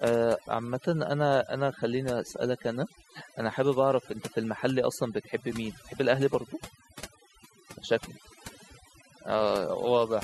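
Throughout the speech, overdone noise removal is audible. The suppression was set too hard. Frequency bands near the estimated noise floor are pulled down or shut off, taking quiet speech detail with them. The background drops and breaks up into twinkling specks.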